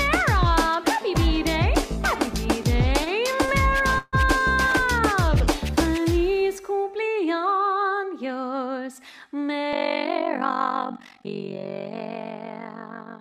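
Two short stalls from late packets occur early in the audio, at 3.04 to 3.08 s and at 3.46 to 3.50 s. At each point the sound does not jump ahead. It hangs on the last moment for 16 ms and then 23 ms, with a faint buzzy hold before continuing from the same place. Nothing is lost, but each stall pushes the rest of the audio later by its own length. That pattern means the jitter buffer ran dry and the receiver stretched what it already had while waiting for the packet. A longer break follows at 3.98 to 4.15 s, heard as a call audio freeze. The last sound is carried on as a decaying buzz or hiss for about 143 ms, with about 20 ms of that at silence, and then the audio picks up exactly where it left off. The delay grows by the full 143 ms and nothing is skipped, which points to packets being held up in transit and the jitter buffer most likely emptying. From 9.73 s to the end, the level pumps rapidly at around 50 Hz with a swing of about 60 dB. 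This is overlap-add ripple. The audio was split into windowed frames and reassembled with an overlap whose windows do not add up to a constant gain, so the level rises and falls once per frame.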